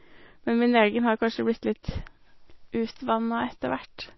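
Across the whole recording the speech has no content above 5.8 kHz, so sibilants sound dull and clipped, and the remaining sound has a watery, swirling texture with metallic chirps on s sounds and softened consonant attacks. The likely cause is MP3 compression at a starved bitrate, which fits roughly 24 kbps: the encoder drops the treble at a fixed cutoff and zeroes weak frequency lines, which then flicker on and off between frames.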